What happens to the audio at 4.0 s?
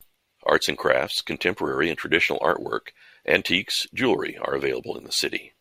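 Nothing goes wrong at 4.0 s; the speech carries on intact through that moment, with no dropout, click or distortion to be heard.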